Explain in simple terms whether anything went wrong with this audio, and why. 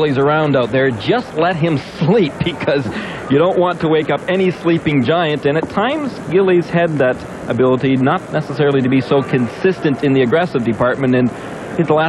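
Nothing went wrong that I could hear; listening through the whole recording, no problem stood out at any point.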